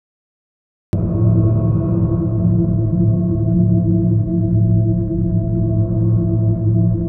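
A cut-off start runs from 0.00 to 0.93 s: the capture began late, so the opening is flat digital silence until the sound bursts in at 0.93 s already in progress, with no natural attack or fade-in, as though entering partway through.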